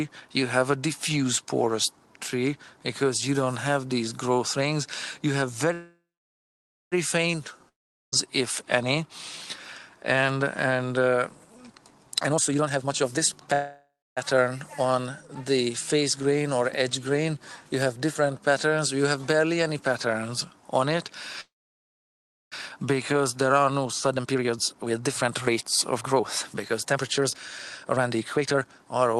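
Audio carried over a call link, likely an Opus path whose coding noise and roughly 12 kHz top end fit a 32 kbps setting, shows three kinds of fault. First, call audio freeze, likely from packets held up on the way so that the jitter buffer ran dry: at 5.73 to 6.94 s, 13.53 to 14.19 s and 21.41 to 22.54 s the receiver stretched the last sound into a fading fill. That fill sank to silence for about 0.91 s, 0.28 s and 1.04 s respectively. The sound then picks up exactly where it stopped, so each event inserts a pause of about 1.18 s, 0.63 s and 1.11 s with nothing lost. Second, a long network dropout, likely a stretch where no audio arrived at all: at 7.69 to 8.14 s the last sound fades into about 0.41 s of silence. The audio resumes further along, with roughly 0.44 s of material gone for good. Third, jitter buffer speed-up, where the buffer held more audio than its target and the receiver trimmed it by cutting out many short pitch-period pieces in a row. 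From 12.15 to 13.53 s the sound runs at 167% speed, shedding around a second. From 23.49 to 27.35 s and from 27.83 to 29.16 s it runs at 137%, shedding roughly 1.5 s and half a second. In all three stretches the pitch stays put while the delivery sounds clearly hurried.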